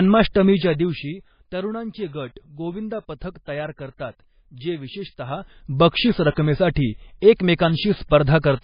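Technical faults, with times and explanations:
Throughout, MP3 compression: the speech sounds watery and swirly with nothing above 5 kHz, likely from heavy low-bitrate encoding that zeroes weak frequency lines and cuts the treble.
0.48 to 1.32 s, zipper noise: level drops about 15 dB in unsmoothed steps roughly 50 times a second, ticking over the sound before "तरुणांचे गट गोविंदा पथक".
5.20 to 5.74 s, zipper noise: after "पथक तयार करतात जे", level rises about 15 dB in 1 dB steps roughly 50 times a second, each step clicking audibly.
6.31 s, pre-echo: a 58 ms smear of hiss precedes a sharp attack, as block-wide quantisation noise fills the quiet moment before it and softens the onset.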